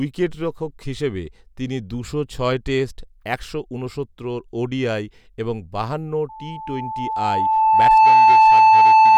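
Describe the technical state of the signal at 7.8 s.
At 7.8 s the microphone is picking up its own loudspeaker, and the loop gain at 878 Hz has exceeded one, causing loudspeaker feedback squeal from 6.29 s to 9.18 s. A pure tone swells over roughly two seconds to about 15 dB above the speech.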